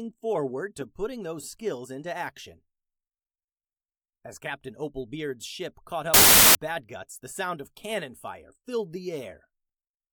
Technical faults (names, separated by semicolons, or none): samples built from the wrong bytes